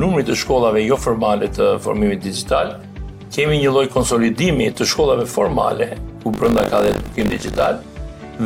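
From 6.32 to 7.67 s there's buffer tearing, a steady robotic buzz at 50 Hz. The writer and reader of the ring buffer have drifted into each other, so a small slice of every roughly 20 ms buffer replays audio from about 70 ms earlier.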